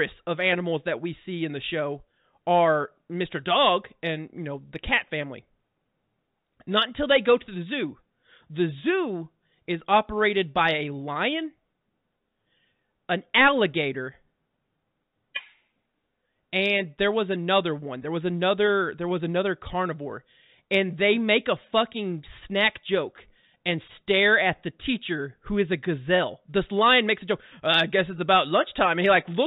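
No faults are audible in this speech; the telephone coding holds everything below 4 kHz with only a faint level-following hiss, consistent with G.711 mu-law carrying the signal as intended.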